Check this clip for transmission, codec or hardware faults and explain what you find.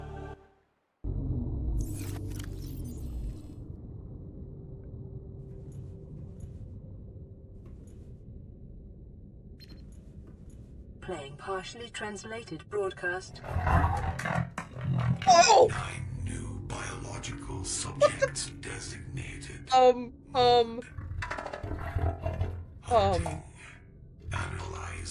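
No faults turn up anywhere in the clip.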